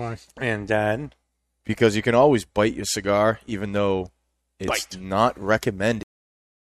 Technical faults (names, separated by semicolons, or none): cut-off end